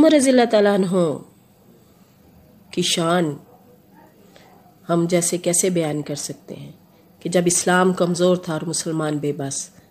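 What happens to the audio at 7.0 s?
Nothing goes wrong at 7.0 s: the audio carries on intact through that moment with no audible fault.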